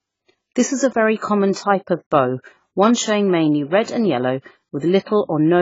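From start to end the speech sounds dull and smeared, with a fizzy, warbling edge on sibilants, likely from heavy AAC compression at a very low bitrate, around 16 kbps. A spectrogram shows nothing above 7.5 kHz.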